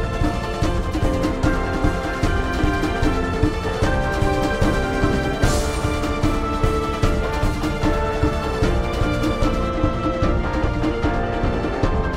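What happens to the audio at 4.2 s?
Nothing goes wrong at 4.2 s; the audio plays through that moment intact.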